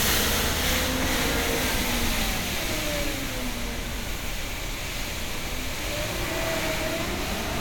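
Nothing technical goes wrong anywhere in these sounds, so there's no fault to point at.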